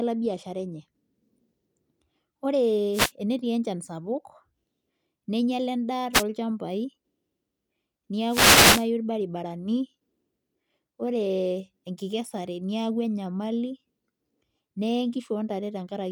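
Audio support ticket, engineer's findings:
Wireless microphone noise hits: static bursts over speech at 2.92–3.12 s (just before "enetii enchan sapuk"), 6.13–6.24 s (right after "neinyiala endaa"), 8.27–8.86 s (longest, about 0.6 s). Component: analogue FM radio link. Multipath reflections cancel the carrier, so receiver noise swells over the signal.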